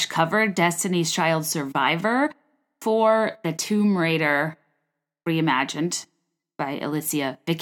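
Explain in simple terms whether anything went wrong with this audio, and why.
Damaged data in a compressed stream: some stored bytes were corrupted, so the decoder misread those frames and lost its place. You hear it as a brief chirp or blip in the speech at 2.25 s, just before "for the", and again from 6.39 to 6.41 s.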